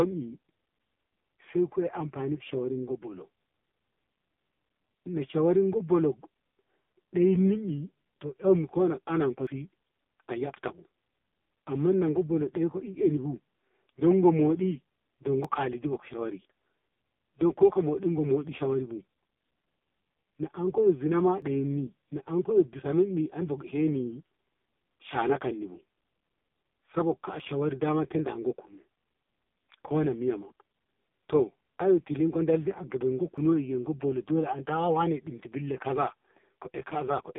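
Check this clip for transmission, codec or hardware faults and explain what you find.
Two problems here: heavy mobile codec coding across the whole clip, plus short regular dropouts.

The AMR narrowband mobile codec runs throughout. Band-limited to roughly 200 Hz to 3.6 kHz with nothing above 3.7 kHz, the speech sounds thin and buzzy. The vocal-tract model has very few bits to work with, which fits AMR-NB at its low 5.15 kbps mode, so the voice comes out synthetic and smeared.

Audio missing between chunks shows up at 9.47, 15.45, 21.42, 27.40 and 33.38 s, about every 6 seconds: after "anan ko" and before "si ayabtabu", after "na anko zina ma", and after "dal di a gaman". Each is a tiny skip of maybe 20 ms, likely lost while a recorder or processor switched from one chunk to the next, with the two sides butted together.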